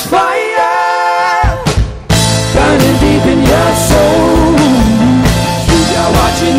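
A faint hiss and grainy roughness ride on the audio throughout, swelling on loud, bright passages and disappearing in the gaps. That is sample clock jitter: an unsteady converter clock, wobbling by around a microsecond or two, misplaces each sample, leaving an error roughly 35 dB below the signal.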